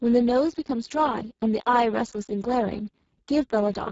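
The whole clip carries heavy Speex codec damage: the speech sounds hoarse and buzzy, which points to a very low quality setting, and nothing comes through above 7.7 kHz.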